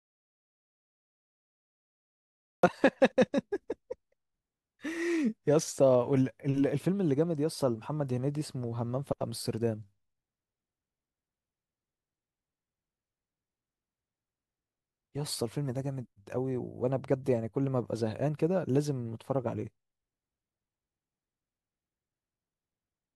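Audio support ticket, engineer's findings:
Input path likely lost at capture (unplugged or failed mic link, or stray mute) while the recorder kept writing silence. Audio dropout to silence, already under way at 0.0 s, until 2.63 s. Dead silence, no room tone; speech enters abruptly mid-flow.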